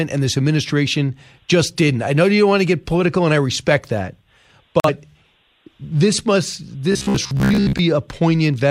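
At 4.80 s the speech cuts out in a digital broadcast dropout lasting until 4.90 s. The receiver muted after a corrupted frame, consistent with losing a single frame of about 43 ms. It sounds like an abrupt hole, and appears as a flat-line gap in the waveform and a blank vertical strip on the spectrogram.

From 6.92 to 7.79 s, just after "this must", the speech becomes a rigid metallic buzz at 66.8 Hz, robotic sound likely from repeated short buffers. A chunk of about 15 ms loops while most of the real audio is skipped. On the spectrogram, evenly spaced horizontal harmonic lines appear, and the waveform shows a roughly repeating cycle.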